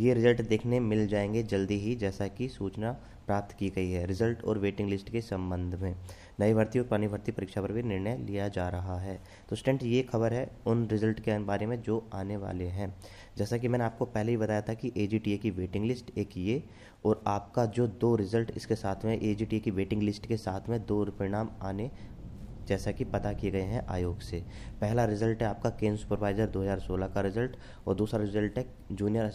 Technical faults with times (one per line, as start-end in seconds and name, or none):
none